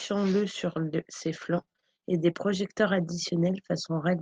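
From 1.57 to 2.36 s the speech breaks up with repeated packet loss, giving a robotic sound. Short holes arrive in quick succession, the longest about 23 ms, and together they remove around 160 ms of audio. The receiver covers each hole by extending the preceding sound, so about a fifth of that stretch is synthetic continuation. This produces a choppy, robotic texture with fragments missing, heard through Opus-coded audio band-limited near 12 kHz.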